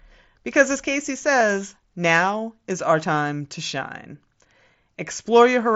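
A speech clip carried over a wideband mSBC headset link, with the 8 kHz audio bandwidth that implies. At 1.40 s, just before "now is our time", concealed Bluetooth headset packet loss leaves a barely noticeable 7.5 ms patch where the receiver filled the gap with recycled recent waveform, which fits a single lost packet.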